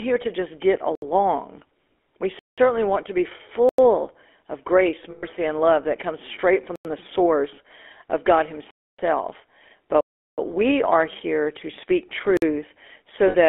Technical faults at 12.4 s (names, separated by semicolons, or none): GSM full-rate codec; block of digital silence